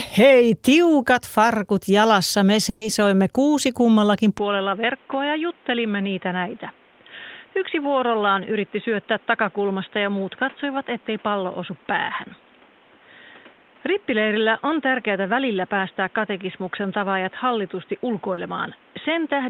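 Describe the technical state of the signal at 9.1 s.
At 9.1 s you're inside a stretch that runs from 4.38 s to the end, where the input has switched to a poorer device, likely a different mic or a headset's call profile. Right after "kuusi kummallakin" the speech turns dull and boxy, with nothing above 3.8 kHz, and drops a few dB in level. There's no gap at the switch, but a new noise floor sits roughly 30 dB under the speech.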